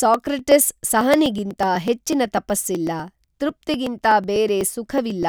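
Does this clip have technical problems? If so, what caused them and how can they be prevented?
Yes. From 0.14 s to 5.23 s the speech carries a steady stream of ticks, one every 0.124 s (about eight per second), roughly forty in all, heard only while there is signal. These are periodic USB or driver dropouts: at a fixed interval something stalls the USB bus or audio driver, and around a millisecond of audio is skipped outright, leaving a tiny discontinuity each time. Prevent this by finding and disabling the background task and using a larger driver buffer.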